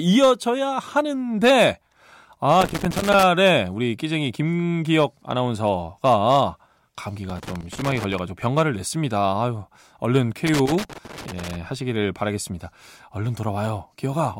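Loose connector crackle breaks into the speech at 2.61–3.23 s, 7.30–8.19 s and 10.47–11.56 s: a contact repeatedly making and losing connection chops the signal into irregular scratchy bursts, seen as jagged waveform dropouts and spikes and scattered broadband vertical streaks on a spectrogram.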